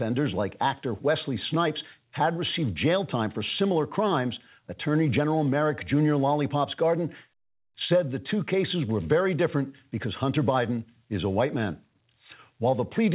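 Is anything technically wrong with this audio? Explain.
No, nothing is technically wrong.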